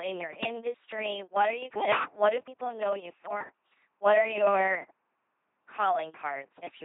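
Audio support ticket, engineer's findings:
LPC-10 vocoder in the path, whole clip. Speech reduced to a ten-pole vocal-tract filter excited by either pulse train or noise, each frame forced fully voiced or fully unvoiced. Result: heavy buzzy, mechanical robot voice; misjudged frames flip to buzz or hiss. Band-limited, nothing above 3.8 kHz. Damage level points to a very low-rate link, consistent with 2.4 kbit/s military-grade coding. Probable component: LPC-10 codec stage.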